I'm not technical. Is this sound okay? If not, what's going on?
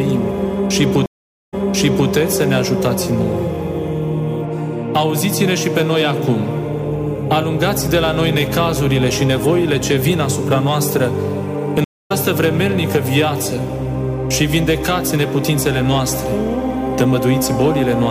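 No. There are two stream reconnects. The connection dropped and restarted. At 1.06 s, half a second of silence, then the sound repeats from about 0.58 s earlier. At 11.84 s, a quarter-second gap skips roughly 0.3 s ahead.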